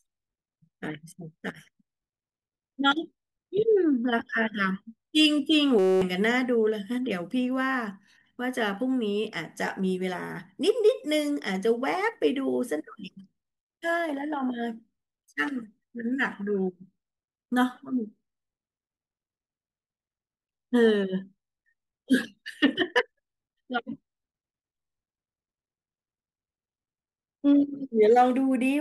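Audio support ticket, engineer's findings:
System hang loop, 5.79 to 6.02 s. Speech cuts out into a steady buzz at 188 Hz, around 43 repeats of one 5.33 ms chunk, which fits a 256-sample buffer. Driver or host stalled and the audio hardware kept replaying the same ring buffer. About a fifth of a second of speech lost. Check the driver and any CPU stall around that point.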